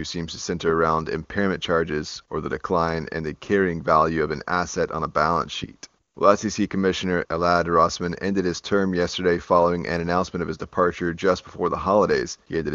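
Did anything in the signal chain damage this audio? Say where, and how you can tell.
No, nothing in the chain damaged this speech; it passed through the AMR wideband (HD Voice) codec at its top rate of 23.85 kbit/s, which leaves at most a faint trace of coding on it.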